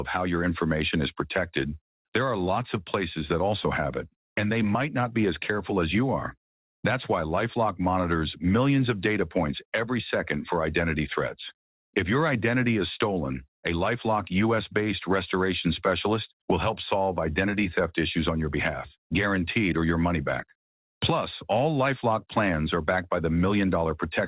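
The audio shows no technical faults, and its content stops at 4 kHz, as expected after a narrowband call path whose microphone processing has also trimmed the lowest bass.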